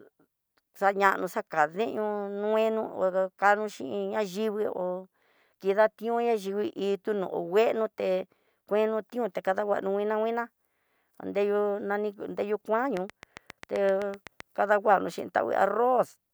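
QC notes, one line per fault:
12.97–14.41 s: train of clicks, regular ticking at about 7.7 per second, around ten pulses standing well above the speech, likely from interference or a faulty connection.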